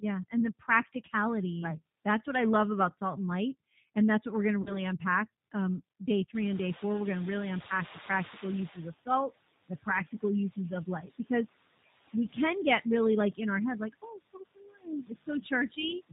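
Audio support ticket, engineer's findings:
Noise suppressor artifacts, whole clip: frame-by-frame band gating cuts steady noise by about 15 dB. The residual floor drops between phrases and swells under speech.

G.729 codec, whole clip: the 8 kbit/s CELP path caps bandwidth at 4 kHz and rebuilds speech from filter, pitch and sparse pulses. Codec damage is plainly audible: dull, rough, slightly synthetic tone, and the residual noise warbles.

VoIP packet loss concealed by the speech codec, 4.62–4.82 s, right after "what we're going to": 40 ms missing, which fits two lost 20 ms packets. The decoder extrapolates last pitch and filter into a fading sound, and speech stays weak or distorted after packets resume.

Noise suppressor catching up, 6.34–8.86 s, ending just before "of salt": the room noise jumps about 20 dB near 6.5 s, to about 16 dB under speech. The lagging noise estimate passes it through under-reduced, then settles over about 2.5 s to about 12 dB of reduction.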